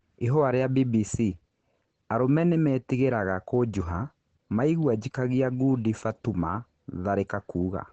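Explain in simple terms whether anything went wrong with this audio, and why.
Opus compression throughout: the speech sounds muffled and hoarse, with nothing above 9 kHz, likely because the codec's speech mode squeezed it hard.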